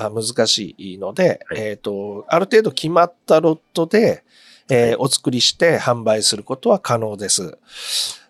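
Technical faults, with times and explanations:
No technical faults can be heard in this recording.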